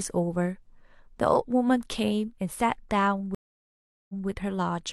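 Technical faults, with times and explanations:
3.35 to 4.27 s, stream reconnect: a dropped connection leaves 0.74 s of silence. A fresh decoder resumes the speech 0.19 s earlier, so a moment repeats.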